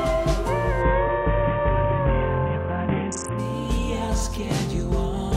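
From 0.82 to 3.39 s a Bluetooth SBC bit pool drop sets in: the treble dulls and a gritty quantisation noise rises, which points to the bit pool falling from about 31 to 5, near 50 kbps. Unlike plain low-pass filtering, the grit accompanies the dullness, and nothing drops out.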